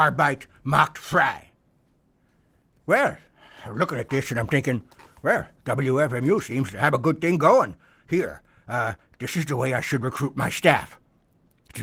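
A speech recording with no technical faults to report.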